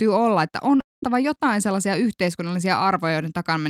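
A Finnish speech recording with two closely spaced faults. First, a short concealed packet loss from 0.77 to 0.80 s, right after "olla että": about 10 ms of audio arrived too late, and the receiver bridged the gap by extending the preceding sound, leaving a brief smear where the audio should have continued cleanly. Almost immediately afterwards, from 0.81 to 1.03 s, a long network dropout is the likely cause of a gap of about 220 ms. The receiver first continues the last sound as a short fading tail, and then about 180 ms of near-silence follows before the audio resumes at "jotain sellaisia", with the missing section never restored.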